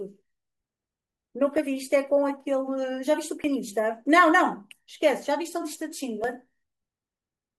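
Likely dropped buffers (overrun) in this speech clip: the speech jumps ahead at 1.58 s, 3.44 s and 6.24 s, losing a few hundredths of a second each time.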